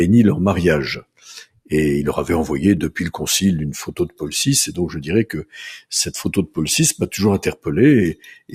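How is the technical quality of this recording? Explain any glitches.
The technical quality is compromised by processing: a noise suppressor designed for speech was applied to music or sounds throughout.

Across the whole clip, the level pumps and thins by roughly 10 dB. The noise suppressor mistakes steady and sustained material for noise and pulls it down.

At 1.0–1.28 s, 1.44–1.72 s, 3.91–4.22 s and 8.14–8.53 s, the sound is cut by the noise suppressor. It sinks by about 21, 20, 15 and 15 dB respectively, because the suppressor treated these stretches as noise.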